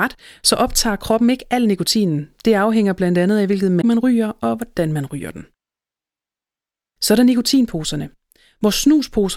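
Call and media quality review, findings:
Damaged data in the compressed stream, 3.78 to 3.84 s. Corrupted bytes in the speech bitstream: the decoder misreads those frames, loses sync and hunts for the next valid frame header. Symptom: a brief chirp or squawk, about 70 ms, breaking through the speech.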